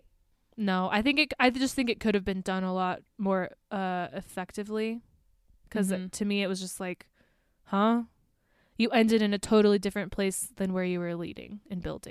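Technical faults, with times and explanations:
1.99 s, block of digital silence: a dropout of about 2.7 ms where the speech signal cuts out to silence and returns with no fade, which fits a single 128-sample buffer going unfilled in time for output. At this length the gap is too brief to register as a hole. What the ear picks up is a brief tick or dip in the speech.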